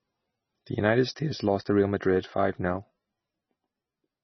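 Heavy MP3 compression runs throughout the speech: nothing above 6 kHz, and watery, swirling artefacts from lines switching per frame, unlike plain low-pass filtering, likely from a very low bitrate.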